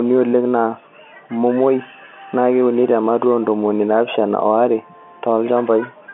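Nothing stood out on listening to this telephone-band speech, which carries the narrow 200 Hz to 3.4 kHz line band expected of G.711 telephone coding.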